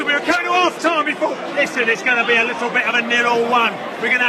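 From the start to 2.79 s the sound is band-limited, with nothing above 12.3 kHz, and codec artefacts are more prominent than in the rest of the clip. At 2.79 s the quality jumps up abruptly, with no gap or dropout. This is an adaptive stream starting at a low bitrate: the player opened on a cheap rendition to begin playback fast, consistent with HE-AAC around 16 kbit/s, then switched to a richer one, fitting AAC-LC near 96 kbit/s, once it had gauged the connection.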